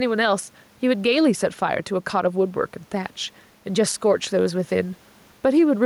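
Gain pumping runs throughout this speech clip. The background, sitting about 39 dB below the voice, rides a gain swing of roughly 5 dB, likely from input gain set too high with a fast limiter clamping down.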